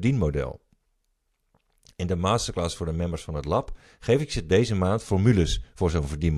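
Nothing goes wrong at any point in this speech recording; there's no technical fault to point to anywhere along the way.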